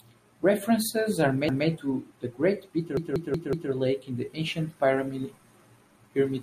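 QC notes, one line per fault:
1.49–1.67 s, repeated buffer: a roughly 0.19 s chunk plays once more with a hard seam, so the speech stutters. Fresh audio didn't arrive in time; the length fits an 8192-sample buffer.
2.97–3.72 s, repeated buffer: same-sized chunk looped four extra times, a longer jittery stutter. Nothing seems dropped afterwards.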